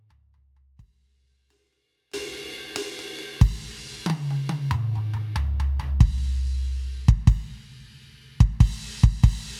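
The source feed likely broke while the path stayed live: an audio dropout to a faint residue, already under way, until 2.14 s, when the music abruptly returns.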